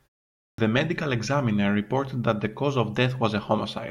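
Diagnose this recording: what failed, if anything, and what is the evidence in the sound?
What failed is a clipped start after a pause, and it's at the playback end. The speech opens out of about 0.54 s of silence, and the first 43 ms or so, 0.54 to 0.58 s, is simply missing, so the first word kicks in abruptly without its onset. That's the output device having gone idle during the quiet lead-in and not being awake or locked again in time, so the opening of the sound got swallowed.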